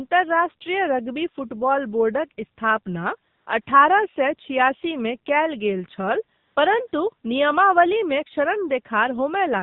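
Buzzy, synthetic-sounding speech runs through the whole recording, with nothing above 4 kHz and a thin, band-limited tone. That is AMR narrowband mobile codec damage, plainly audible, from 8 kHz coding at a low rate consistent with about 7.4 kbps. AMR comfort noise also briefly replaces the real background with a smooth, steady hiss that switches in and out: 3.30–3.46 s (160 ms), 3.62–3.66 s (40 ms) just before "सए छियासीमे कयल गेल", 6.38–6.56 s (180 ms) right after "छियासीमे कयल गेल छल", and 6.88–6.92 s (40 ms). In each gap the phone judged the talker silent and stopped sending speech frames, so the receiver filled the gap with noise built from a coarse level-and-spectrum description.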